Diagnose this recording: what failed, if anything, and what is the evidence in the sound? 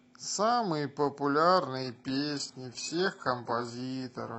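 Adaptive stream at a lower bitrate, from 1.77 s to the end of the speech, a network-stage fault. With no gap, codec artefacts suddenly rise, which fits the player switching from roughly 96 kbit/s AAC to a 12 kbit/s HE-AAC rendition after the connection slowed.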